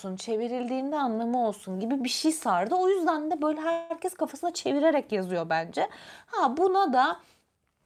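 At 3.71 s, after "yüzden de böyle", a call audio freeze runs to 3.92 s. The last sound is stretched into a fading buzz for about 186 ms, with nothing lost. The likely cause is delayed packets draining the jitter buffer, and "kafasına çevirerek yazıyor bence" resumes late.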